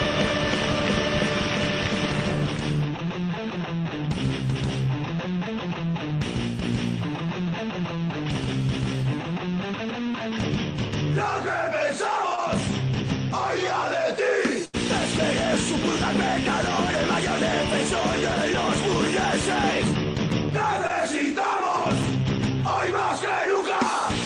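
At 12.35 to 12.39 s there is a short concealed packet loss: about 20 ms of audio never arrived, and the receiver patched it by extending the preceding sound. It is heard as a quick smear or wobble. On a spectrogram the partials flatten briefly, and the waveform repeats its last cycles.

From 14.65 to 14.75 s comes a burst of packet loss. About 80 ms went missing, replaced by a continuation that dies away as a held buzz or fading hiss before the audio jumps ahead. The spectrogram shows a frozen, dimming band, and the waveform envelope decays, then restarts abruptly.

At 20.87 to 20.91 s the same short concealed packet loss recurs, a roughly 20 ms patch with the same brief smear and repeated waveform cycles.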